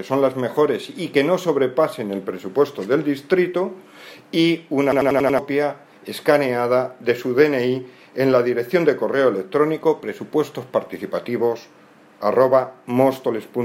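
At 4.92 s a system hang loop begins: the computer or its audio driver stalled while the sound hardware kept replaying the same ring buffer. A single 93 ms slice, which fits a 4096-sample buffer, repeats exactly five times until 5.39 s, producing a machine-gun stutter at about 10.8 Hz instead of a buzz. When playback resumes, about half a second of the real audio is missing, so the sound jumps forward.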